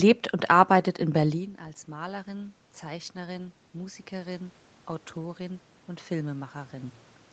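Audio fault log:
1.1–4.59 s automatic gain rising: input dropped about 17 dB, so gain control slowly raised its gain about 6 dB, making speech and room noise swell together.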